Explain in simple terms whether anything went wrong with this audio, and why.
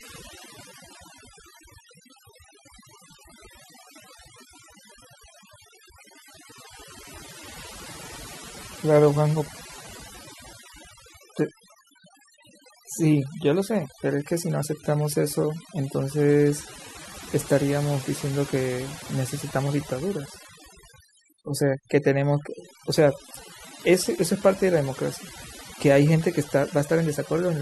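Something did go wrong: overdone noise removal, running through the whole clip. A noise reducer was set too strong. It switched off small bands of sound near the background noise, taking quiet parts of the speech too. The background drops and breaks up into twinkling specks.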